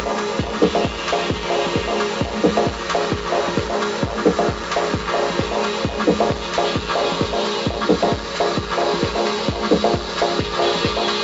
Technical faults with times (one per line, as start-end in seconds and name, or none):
none